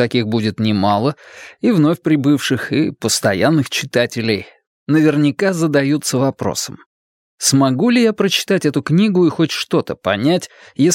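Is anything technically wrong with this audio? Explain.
No, nothing technically wrong is audible here, so there is no fault to report.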